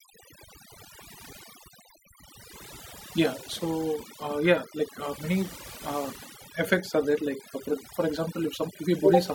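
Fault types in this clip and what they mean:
Overdone noise removal: a noise reduction pass was pushed way too hard on a noisy speech recording, so any frequency band sitting close to the estimated noise floor gets pulled down or switched off, and the quieter bits of the voice get dragged out along with it. You hear it across the whole clip: the background drops and breaks up into little twinkly specks.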